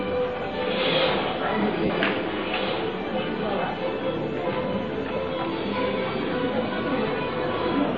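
A noisy smear at 1.85–1.90 s, and briefer ones at 5.16 s and 7.08 s: lost LE Audio frames, which the LC3 decoder filled by repeating the last spectrum with random signs.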